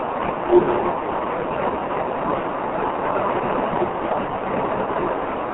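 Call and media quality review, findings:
G.723.1 codec, throughout. Speech muffled and hoarse, consonants smeared, nothing above 4 kHz. Slow 30 ms frame updates blur transients. Heavy damage fits a low-rate codec near 6 kbit/s. Faint room noise well below speech.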